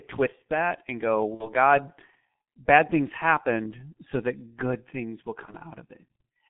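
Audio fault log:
throughout, G.723.1 codec: the band stops near 3.5 kHz with little below 150 Hz, and the voice sounds muffled and hoarse with smeared consonants. That fits a low-rate coder of roughly 6 kbit/s using 30 ms frames. Unlike plain band-limiting, the roughness comes from a coarse, slowly updated voice model.
1.34–1.51 s and 5.45–5.55 s, VoIP packet loss concealed by the speech codec: right after "twist that and go" and after "that good things will", the sound smears out and fades. The decoder is repeating its last pitch and filter at falling gain, which fits about 60 ms and 30 ms of lost audio. Unlike a dropout, there is no silence, and the voice stays weak briefly afterwards.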